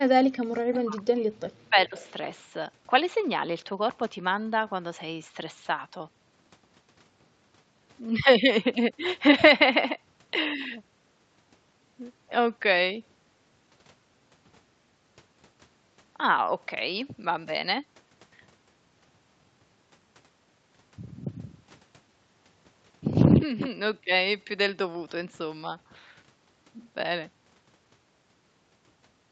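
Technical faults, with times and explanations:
0.16 to 1.98 s, speech suppressed in double talk: the voice dips as far as about 40 dB, in pieces totalling around 1.5 s. This is likely an echo canceller turning down its own talker along with the loudspeaker echo, unlike a leak, which adds sound.
0.73 to 0.78 s and 1.97 to 2.11 s, echo leak: brief delayed copies arrive 426 ms late, at about 15 dB then about 25 dB below the speech. They are likely loudspeaker pickup the canceller missed, an added echo rather than a loss.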